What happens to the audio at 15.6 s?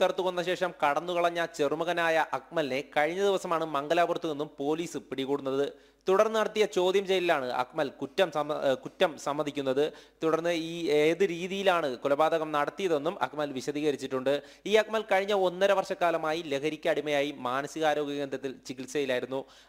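Nothing goes wrong at 15.6 s; the audio plays through that moment intact, with no dropout, click, distortion or other fault.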